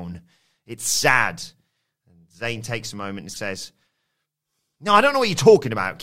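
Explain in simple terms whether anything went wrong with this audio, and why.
Two spots in this speech have a corrupt frame decoded. Bits inside the compressed data got scrambled, and the decoder played those chunks anyway, so sound energy lands at the wrong frequencies for as long as the bad chunk lasts. The first runs from 3.29 to 3.37 s and covers a few frames. The second, from 5.65 to 5.68 s, is a single frame and quieter than the first. Each comes across as a brief chirp, blip or burst of noise.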